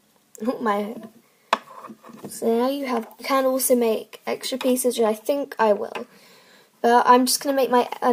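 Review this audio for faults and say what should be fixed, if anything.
At 3.19 to 3.24 s the audio jumps abruptly ahead with a short blip, likely a stream segment skipped: a segment failed to load and the player went straight to the next one. A spectrogram shows a thin vertical broadband stripe where the content changes without transition, and the waveform shows a sudden discontinuity. Prevent it by having the player retry failed segment requests and buffer further ahead before playback.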